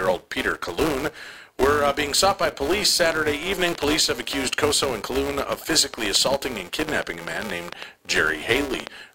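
From the start, a filter is restarted on every block, so each block opens with a tiny transient. This gives a buzz near 345 Hz, consistent with 128-sample blocks.

From 3.12 s, just after "being sought by police", a train of clicks runs to 8.88 s. About thirty clicks arrive unevenly, roughly five per second, peaking about 15 dB above the speech, likely from interference.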